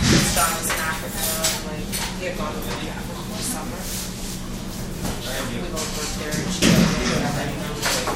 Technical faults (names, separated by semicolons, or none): none